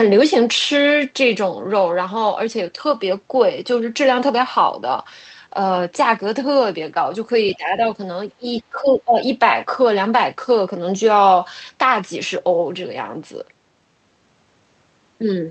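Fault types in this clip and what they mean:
Other side's voice leaking through: From 7.47 to 7.56 s a faint second voice, roughly 20 dB below the main speech, slips in for under a tenth of a second. This is likely far-end loudspeaker sound that the echo canceller failed to fully subtract from the microphone.
Speech suppressed in double talk: Right after the leak, 7.56 to 7.82 s, the speech dips by around 10 dB, then drops much deeper, near 20 dB, across most of 8.38 to 9.18 s. This is likely the echo canceller attenuating everything while both ends talk at once.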